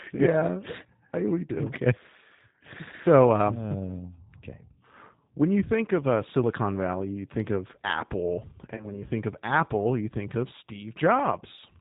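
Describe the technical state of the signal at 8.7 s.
VoIP packet loss concealed by the speech codec affects 8.75 to 9.03 s. Short gaps totalling about 40 ms, none longer than 20 ms, are scattered across an 80 ms stretch. The decoder fills each gap by repeating its last pitch and filter at falling gain, so the speech is stretched into a buzzy tone or coloured noise that fades. Because every frame builds on the one before, it stays weak or distorted until 9.03 s, well after the gaps end. Plain dropouts would instead leave clean silences or clicks.

Underneath, and throughout the clip, the G.729 codec is plainly audible. Nothing above 4 kHz is present, and the speech sounds rough and synthetic, which fits an 8 kbit/s G.729 stream. A simple low-pass filter would dull the sound without adding that rough, synthetic texture.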